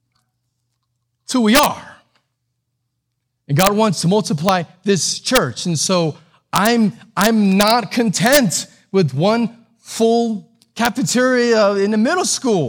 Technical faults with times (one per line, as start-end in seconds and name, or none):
1.55-1.66 integer overflow
3.59-3.67 integer overflow
4.49 integer overflow
5.35 integer overflow
6.56-6.67 integer overflow
7.21-7.71 integer overflow
8.26-8.37 integer overflow
10.85 integer overflow